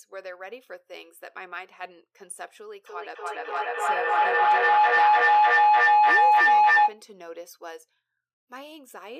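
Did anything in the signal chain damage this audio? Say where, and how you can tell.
Yes. From 2.86 s to 7.07 s a feedback howl takes over the speech: a tone around 1 kHz swells until it sits about 18 dB above the talker, pulsing roughly every 300 ms. This is a call-processing failure. Two devices in the same room on one call form an acoustic loop with gain above unity, so each pass reinforces the frequency the loop favours. The pulse rate reflects the loop's round-trip delay, and the howl ends when the loop is broken.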